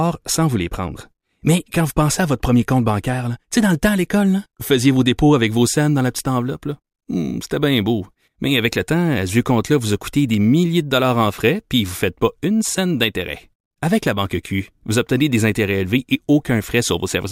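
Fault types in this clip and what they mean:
Crude rate conversion: from 5.47 s to the end, the sample rate has been changed by simply repeating the nearest sample with no filtering, in a pattern that fits a step from 32 kHz up to 48 kHz. The repeating error sits roughly 25 dB below the speech and gives a gritty, inharmonic fizz on louder and brighter syllables. A spectrogram shows faint mirrored lines that don't follow the voice's harmonics, and a zoomed waveform shows small stair-steps.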